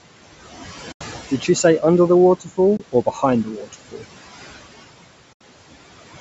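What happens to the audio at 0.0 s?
From 0.0 s and throughout, noise suppressor artifacts are present. Steady noise is pulled down by about 17 dB between phrases, so the residue breathes.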